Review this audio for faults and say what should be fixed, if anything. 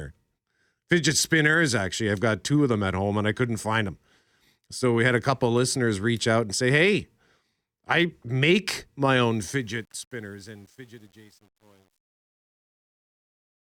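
Truncation distortion on the fade-out from 9.24 s to the end, worst from 10.06 s, where the level steps grittily, fitting roughly 9-bit resolution, unlike a clean fade's smooth decay. Keep the fade stage at higher word length and dither before reducing bit depth.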